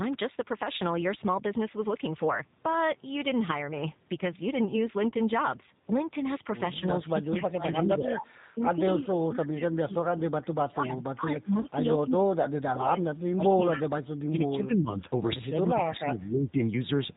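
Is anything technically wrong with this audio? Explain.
Yes, the speech has four kinds of fault.

The whole clip carries G.729 codec damage, consistent with an 8 kbit/s stream. Each frame is rebuilt from a vocal tract model and a few pulses, which sounds rough and synthetic. A spectrogram shows nothing above 4 kHz.

VoIP packet loss concealed by the speech codec occurs at 5.09–5.14 s and 11.61–11.66 s. Each gap is about 30 ms, consistent with one lost packet. The decoder stretched the previous frame's pitch and filter with falling gain, which shows as a smeared, fading patch.

Speech suppressed in double talk, likely caused by the echo canceller ducking both talkers at once, occurs at 7.12–13.0 s, 13.3–13.81 s and 14.29–15.01 s. Level drops by up to about 25 dB, about 20 dB and about 10 dB, cutting the voice thin or choppy. The waveform shows collapsed, gappy envelopes.

An echo leak appears at 13.73–13.82 s, likely from loudspeaker pickup that the echo canceller did not fully remove. 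A copy delayed by 233 ms comes back about 5 dB below the speech. A spectrogram shows duplicated harmonics offset in time.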